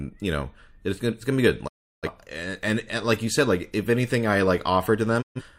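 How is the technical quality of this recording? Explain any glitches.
The speech carries two digital broadcast dropouts, at 1.67 to 2.08 s and again at 5.21 to 5.42 s. In each, the receiver stopped getting valid frames, whether from signal loss or failed checksums, and muted until clean data resumed. The sound fades to silence within about 20 ms, leaving a hole of roughly 0.34 s in the first case, which fits around eight lost frames, and 0.13 s in the second. The audio sent during those gaps is gone.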